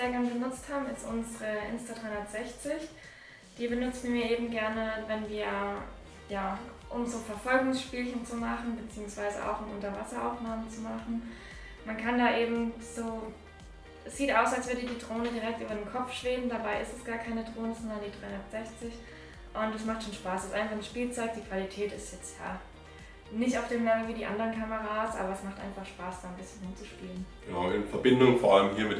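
No technical faults can be heard anywhere in this audio. There is nothing in the sound that calls for technical comment at any point.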